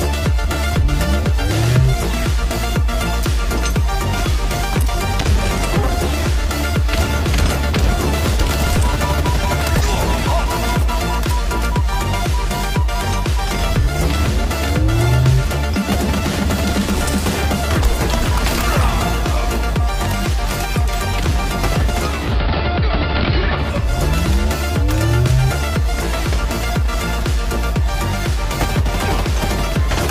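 At 21.98 s the receiver loses the digital stream and blends to the AM analogue signal over about 441 ms, returning at 23.98 s. During that stretch the bandwidth narrows and hiss sits roughly 30 dB below the signal, with level unchanged.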